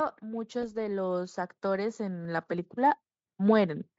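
From 0.25 s to 3.87 s, automatic gain rising slowly lifts speech and background together by about 7 dB, seen as a steadily widening waveform envelope.

At 0.61 to 0.65 s, VoIP packet loss concealed by the speech codec fills a gap that fits one lost 20 ms frame with a fading, stretched extrapolated sound. The spectrogram shows smeared, repeated patterns there.

At 2.25 s, an abrupt skip in the speech, with roughly 10 ms missing, is likely a dropped buffer (overrun). The waveform shows a sudden discontinuity, and the spectrogram shows a thin vertical broadband line.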